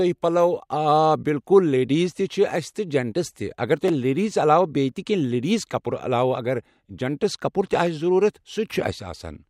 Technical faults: chunks out of order

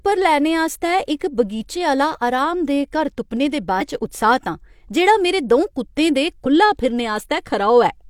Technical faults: compressed frames skipped

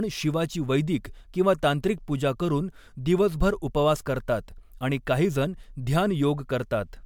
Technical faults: generation loss

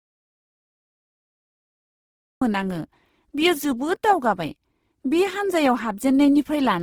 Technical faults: Opus compression; audio dropout to silence

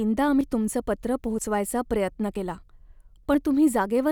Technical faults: audio missing between chunks

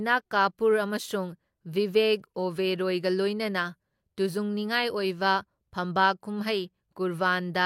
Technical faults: AAC frame loss with concealment

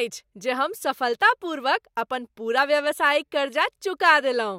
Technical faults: none

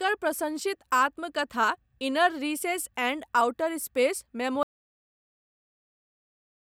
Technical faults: audio dropout to silence

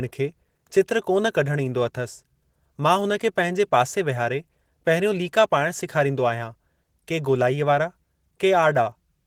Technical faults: Opus voice compression

